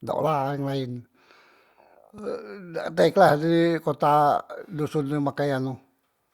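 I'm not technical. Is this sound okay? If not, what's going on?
Yes, no faults can be heard.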